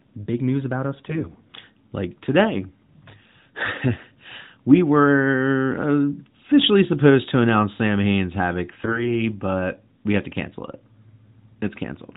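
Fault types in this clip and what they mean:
AMR bit errors: speech briefly turns hoarse and gargly at 0.96–1.32 s and, harsher, at 8.82–9.12 s, though pitch and loudness hold. Bits flipped in weakly protected parts of the mobile codec's frames misplace its excitation pulses and skew gain and spectral detail.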